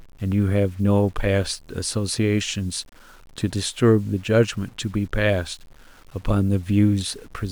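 Across the whole speech clip there is a grainy, rasping distortion that tracks the voice, turning quiet passages gritty and sputtering as they fade. This is low bit depth without dither, likely 8-bit rounding, leaving error only about 35 dB below the signal.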